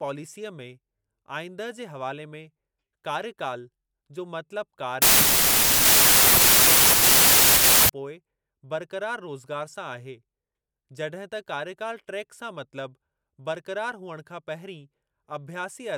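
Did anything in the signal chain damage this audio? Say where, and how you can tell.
Yes. From 5.02 to 7.89 s the speech sinks under loud, harsh noise, audible only faintly, and it runs slow and low, at about 0.75 times normal speed and pitch. This is a wrong sample width fault at the sample-format conversion stage. The 3:4 slowdown fits 32-bit data being read as packed 24-bit. Most values are stitched from misaligned bytes, producing noise, and only some keep the signal's top bits.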